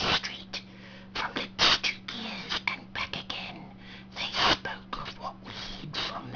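Aliasing runs through the whole clip. The sound was resampled without an anti-aliasing filter, which fits a conversion from 48 kHz down to 11 kHz. Everything above the 5.5 kHz fold point mirrors back into the audible band as unrelated, inharmonic tones. The folded energy sits roughly 5 dB above the genuine content, so bright transients come out gritty and metallic, and the spectrum stays dense right up to the 5.5 kHz edge.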